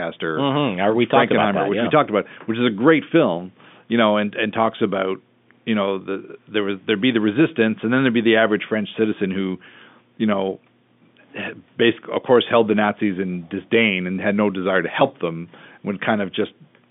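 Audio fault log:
No faults are present; the speech comes through a normal telephone line with G.711 coding at 64 kbps, so the sound sits within roughly 150 Hz to 3.6 kHz and nothing reaches above 3.8 kHz.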